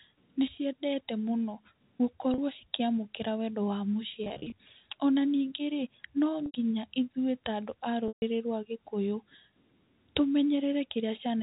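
Packet loss with pitch repetition occurs at 2.34 s, 4.24 s, 6.46 s and 8.08 s over the narrowband G.711 telephone path. Lost stretches were bridged by looping the last pitch period. The 40 ms gap at 2.34 s is a brief buzzy hold. At 4.24 s, 140 ms of loss is scattered across 280 ms and causes repeated brief buzzy holds. The 80 ms gap at 6.46 s and the continuous 140 ms gap at 8.08 s sustain the buzz, then fade toward silence before the speech cross-fades back.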